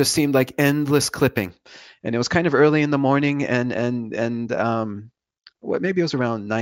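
From 0 to 1.5 s, imaging from sample-and-hold upsampling: unsmoothed repeated samples mirror the speech into a metallic 8 to 16 kHz fizz, about 15 dB down, moving against its pitch, unlike steady hiss.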